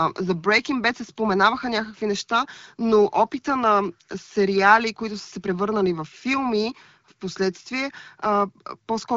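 A speech clip with no technical faults to report. It has passed through an AMR wideband (HD Voice) link at 12.65 kbit/s, so its bandwidth stops near 7 kHz, with the range above 6.4 kHz filled by shaped noise rather than coded directly.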